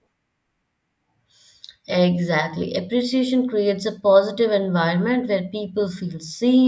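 No technical faults occur at any point in the speech.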